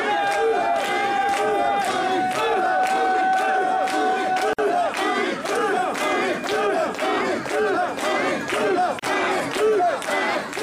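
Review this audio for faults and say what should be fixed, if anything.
There are two gaps at joins of encoded pieces: a silence of about 52 ms from 4.53 to 4.59 s, and a shorter one of about 32 ms from 8.99 to 9.03 s. Each time the sound just drops out, with edges smeared, then picks up where it left off. It looks like each piece went through the encoder on its own, and the start-up delay and the padded last frame were never trimmed before splicing. To prevent it, encode the audio as one continuous stream, or use a gapless-aware joiner that strips the encoder delay and padding at every join.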